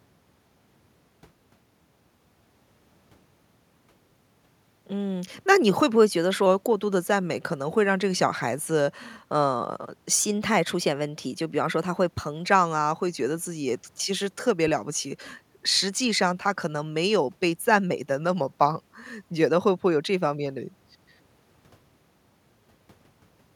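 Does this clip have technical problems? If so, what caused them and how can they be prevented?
Yes. From 10.19 to 12.48 s the speech runs 6.4% fast and about 107 cents sharp, then snaps back, likely a drift correction step resampling abruptly to rebalance its buffer. Prevent it by letting clock-matching software adjust the rate gradually, or by locking both devices to one clock.

At 14.68 to 14.74 s a deep phantom power thump, decaying within about 13 ms, comes from a supply switching on a live input. Prevent it by muting the channel before toggling phantom power.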